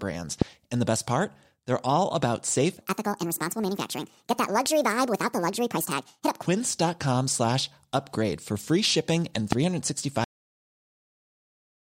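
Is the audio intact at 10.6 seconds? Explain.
No. At 10.6 s the clip is inside a cut-off end. The speech stops abruptly at 10.24 s, mid-sound, because the final buffers were never written. Pure digital silence follows to the end, with no decay.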